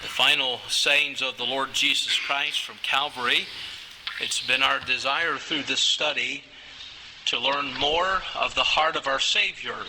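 At 5.33 s the audio abruptly loses its top end, with nothing above about 8.2 kHz from then to the end, and more codec artefacts, yet there is no gap or dropout at the change. This is an adaptive stream switching to a lower bitrate after the connection slowed, and the character of the loss fits a step down from roughly 64 to 16 kbit/s Opus.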